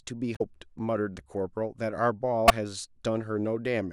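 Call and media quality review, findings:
Damaged data in the compressed speech stream at 0.33–0.41 s and 2.48–2.51 s: corrupt frames, decoder loses sync and hunts for the next header, producing brief glitches.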